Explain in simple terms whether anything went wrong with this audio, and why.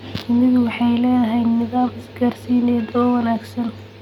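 Nothing went wrong with this speech recording, because no technical fault can be heard anywhere in it. Nothing in the sound points to a problem in how it was recorded or passed along.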